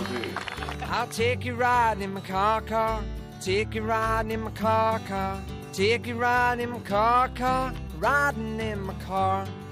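From 8.38 to 9.19 s a GSM phone buzz appears: a nearby handset in a call transmits bursts about 217 times a second, which the audio circuit rectifies into a steady, raspy buzz about 29 dB below the signal. A spectrogram shows evenly stacked horizontal lines at 217 Hz and its multiples.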